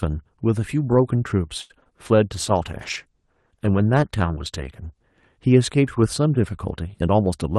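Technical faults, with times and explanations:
1.61–1.93 s: repeated packet loss (robotic sound). Four quick dropouts, longest 84 ms, are bridged by extending earlier audio, leaving choppy speech with short holes.
2.25–5.10 s: call bitrate drop. Coarser encoding for nearly three seconds makes the speech rough and watery, which fits the bitrate falling from 32 to about 15 kbps.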